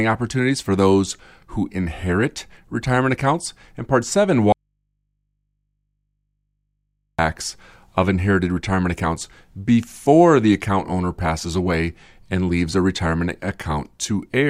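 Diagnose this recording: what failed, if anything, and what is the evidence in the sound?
Audio dropout to a faint residue from 4.52 to 7.19 s: the speech cuts abruptly to hum about 55 dB down, likely a 2.7 s break in the analogue input wiring.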